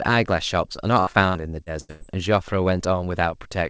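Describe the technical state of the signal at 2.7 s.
At 2.7 s the speech signal is intact, with no dropout, glitch or distortion, just the ordinary bandwidth of the call path, which carries nothing above 8 kHz.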